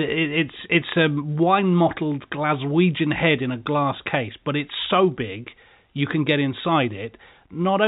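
The speech sits in an ordinary G.711 A-law telephone channel at 64 kbps, so everything above 4 kHz is absent and only the faint level-following quantisation hiss of that format lies beneath it, with no technical faults present.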